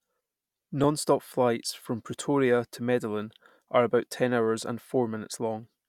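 From 0.84 s to 4.82 s the speech carries a regular click, four of them spaced 1.33 s apart. The pattern points to clock drift buffer slips, likely caused by two devices running on separate clocks that disagree by roughly 500 ppm. The buffer between them drifts until a small block of a few tens of samples is dropped or repeated, producing a brief discontinuity that is heard as a tick on the speech at each slip.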